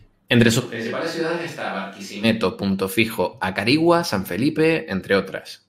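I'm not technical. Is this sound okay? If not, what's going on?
No. From 0.61 to 2.23 s the recording likely dropped the close microphone and picked up one farther away instead: a switch to a distant microphone. The speech suddenly turns hollow and roomy, thinner in the low end, noticeably quieter, then snaps back.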